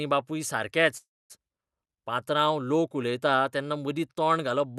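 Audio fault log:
0.97–1.32 s, call audio freeze: The speech halts and the last sound lingers as a short fading buzz or hiss, then 0.23 s of silence. It resumes where it stopped. Nothing is lost, but the rest runs 0.32 s late. Delayed packets likely emptied the jitter buffer.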